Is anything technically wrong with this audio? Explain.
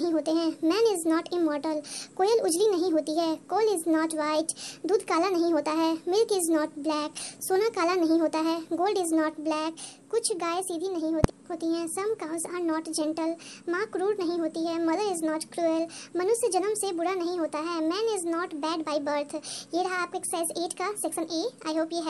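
Yes. The whole clip has a wrong sample rate fault. It plays back about 1.38 times too fast, with no rate conversion. Speed and pitch rise together, roughly 5.5 semitones higher. That ratio fits audio recorded at 32 kHz but played at 44.1 kHz. Everything sounds hurried and shrill.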